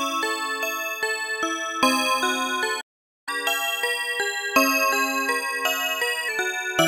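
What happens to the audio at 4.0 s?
At 4.0 s the audio is in a catch-up at higher speed, running from 3.29 s to 6.29 s. After a stall the player resamples its backlog at 1.1 times normal speed, so everything plays faster and about a semitone and a half sharp for those three seconds, winning back lost time.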